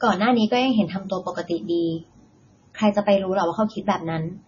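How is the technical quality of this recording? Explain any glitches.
The recording is heavily degraded by compression. MP3 compression, throughout: with nothing above 6.9 kHz and watery, swirling speech, the likely cause is a starved encoder at around 24 kbps dropping treble and flickering weak frequency lines.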